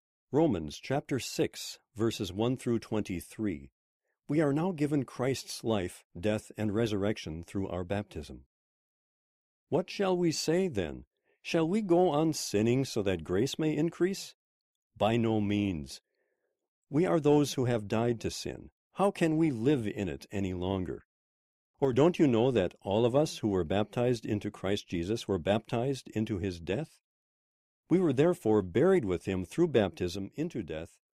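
At 21.85 to 21.93 s the speech briefly sinks by about 6 dB, then dips the same way again from 30.16 s until the end. The likely cause is one channel dropping out, so the mono sum loses half of everything shared between channels.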